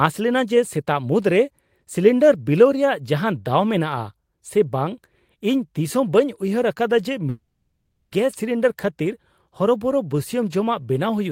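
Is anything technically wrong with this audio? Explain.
Yes, there is a long network dropout from about 7.29 s to 8.13 s. The speech stops, and the last sound is stretched into a buzzy, hissing tail that fades out, leaving roughly a tenth of a second of near silence before speech returns with about 0.82 s missing. This is likely a stream interruption in which the receiver padded the gap with decaying concealment. Unlike a brief packet glitch, the lost span is long and never recovered.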